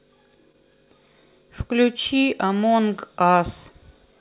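It's a speech recording that came through a call, and between 0.52 and 0.55 s there's a bit of short concealed packet loss: around 20 ms of audio didn't arrive in time, and the receiver covered the gap by extending the preceding sound for about 14 ms before blending back into the real signal. You hear it as a quick smear or wobble. The narrowband character, with nothing above 4 kHz, fits a G.711-style call path.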